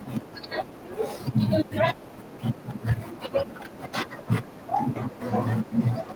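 At 0.35 to 0.37 s a skip ahead drops roughly 0.7 s of speech; playback jumps forward with no gap, showing as an abrupt waveform splice. From 0.45 to 2.91 s a jitter buffer speed-up trims pitch periods, removing about a fifth of a second; speech runs 109% fast at unchanged pitch, harmonics staying level on a spectrogram.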